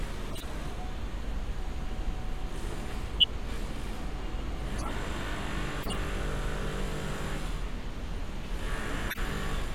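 Short chirps and noisy blips cut through the sound at 0.30–0.44 s, 3.19–3.24 s, 4.78–4.91 s, 5.81–6.00 s and 9.08–9.19 s. The one near 3.2 s is the briefest and much the loudest. Each is a corrupt frame decoded: flipped bits left gains or codes misread, yet the decoder played the damaged frames anyway, spraying energy into wrong frequencies for a few frames' worth of time.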